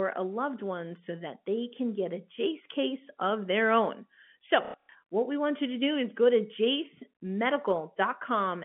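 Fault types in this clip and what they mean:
Packet loss with last packet repeated: from 4.65 to 4.95 s, just before "what we want you", lost audio is filled by replaying the previous packet, about 210 ms across 300 ms, longest run 90 ms. The repeated runs give a brief robotic stutter.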